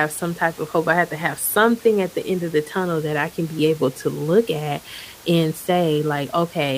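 No system faults are audible in this speech recording; the only steady background is room noise from the recording space, sitting about 23 dB below the speech.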